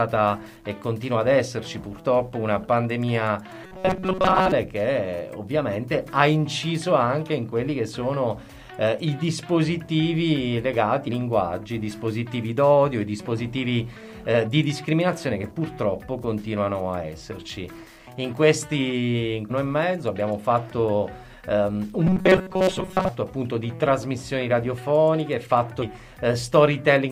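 From 3.64 to 4.52 s the sound turns into a rigid, metallic buzz at a fixed 188 Hz. This is robotic sound from repeated short buffers: audio likely arrived too seldom, so most of it was replaced by repeats of chunks about 5.3 ms long.

Brief blips at 11.07 s and 19.50 s point to damaged data in a compressed stream. The decoder lost sync on bad frames, so each event is momentary rather than a sustained buzz.

The same 188 Hz buzz returns from 22.07 to 23.09 s. Within it, another corrupted-frame glitch falls at 22.68 to 22.70 s.

A final one follows at 25.81 to 25.83 s.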